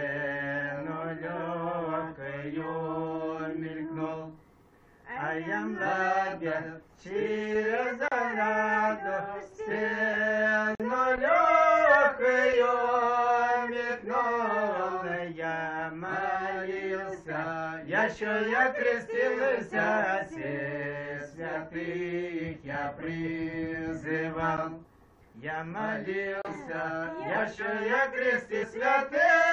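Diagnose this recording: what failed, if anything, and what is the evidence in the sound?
The driver or buffer stage failed to deliver samples in time, leaving blocks of digital silence at 8.08–8.12 s (35 ms), 10.75–10.80 s (46 ms), 24.57 s (12 ms) and 26.42–26.45 s (31 ms). The waveform drops to a flat, near-silent line, and a spectrogram shows blank columns. The 12 ms gap fits an unfilled 512-sample buffer.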